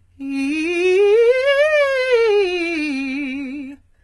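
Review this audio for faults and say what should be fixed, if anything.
Throughout the music, the treble appears likely rebuilt by HE-AAC compression at a very low bitrate, which fits about 16 kbps. Upper bands are copied from lower ones rather than coded, and nothing survives above 11.8 kHz, so the top sounds gritty and metallic, with misaligned harmonics. Encode at a higher bitrate with a full-band codec such as AAC-LC.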